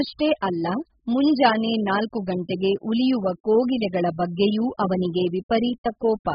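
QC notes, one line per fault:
Throughout, AAC compression. Nothing is heard above 5.1 kHz. The speech is dull and smeared, with warbling, fizzy sibilants. The likely cause is AAC-LC coding at a very low rate, fitting about 8 kbps. Starved of bits, the coder cuts the top band and leaves patchy spectral detail.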